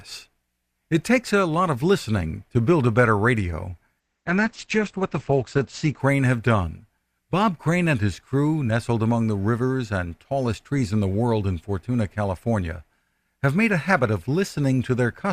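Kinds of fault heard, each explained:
Adaptive stream at a lower bitrate: from 4.0 to 6.0 s, after "build a better radio", speech abruptly turns thin with nothing above 8.6 kHz, fitting roughly 12 kbit/s Opus; unlike a dropout, there's no gap.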